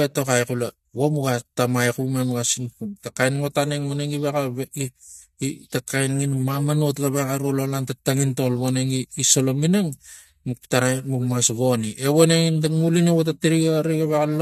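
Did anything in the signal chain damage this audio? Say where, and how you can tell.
No, no damage is audible.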